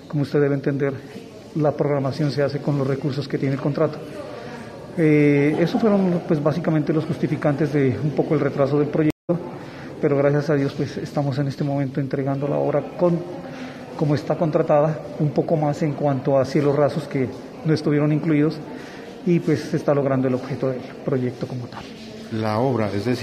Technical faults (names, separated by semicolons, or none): stream reconnect